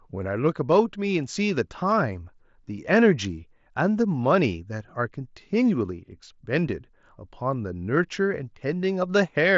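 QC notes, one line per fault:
Nothing to flag here: the speech comes through the Bluetooth mSBC headset link the way that wideband path normally carries it, with nothing going wrong along the way.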